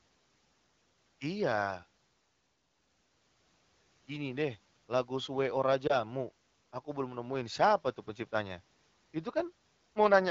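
A speech clip, carried over the AMR wideband (HD Voice) codec at what sounds like a rate of about 12.65 kbit/s, with lost AMR speech frames between 5.87 and 5.97 s. There the decoder fills the gap by repeating its last good pitch and vocal tract settings at reduced gain, producing a brief dip or warble, which fits a single dropped 20 ms frame. On a waveform this shows as a short amplitude sag. A spectrogram shows smeared, flattened harmonics before normal detail resumes.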